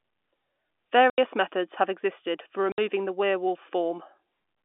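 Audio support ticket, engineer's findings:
Packet loss filled with silence: hard dropouts at 1.10–1.18 s (80 ms, just before "methods have existed for") and 2.72–2.78 s (60 ms, before "the werewolf"). Waveform shows flat silent gaps; spectrogram shows blank vertical bands. Lengths fit four and three lost 20 ms packets; receiver played silence in their place. G.711 A-law at 64 kbps, line band 250–3500 Hz.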